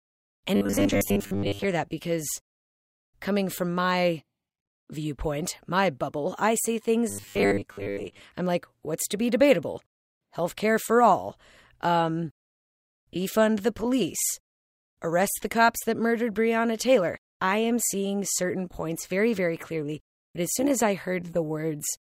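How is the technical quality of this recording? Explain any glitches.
The recording has two stretches of robotic sound from repeated short buffers. The first runs from 0.56 to 1.65 s, ending just before "that because". The second runs from 7.09 to 8.20 s, between "my bubble I see" and "I'm like what's to". In both, the speech becomes a rigid metallic buzz at 100 Hz that roughly tracks the words. The likely cause is a player starved of new audio repeating a roughly 10 ms block in place of most of the real signal.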